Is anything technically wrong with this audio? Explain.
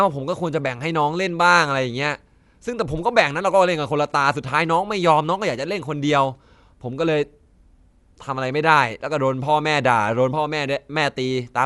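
Yes. Throughout, the speech sounds dull, with nothing above about 11.5 kHz and a rough, fluttering noise clinging to tonal parts. This is likely Dolby Digital compression at a low bitrate, consistent with about 64 kbps. The encoder narrowed the band, starved many frequency lines of bits, and the decoder filled them with noise.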